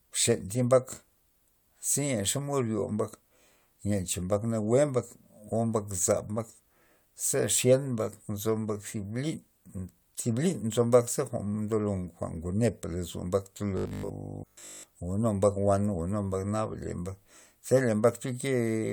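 At about 13.77 s the speech collapses into robotic sound from repeated short buffers, lasting until 14.83 s: a rigid, metallic 50 Hz buzz. That's likely a 20 ms chunk looping while new audio arrived too slowly, with essentially the whole stretch repeated rather than fresh.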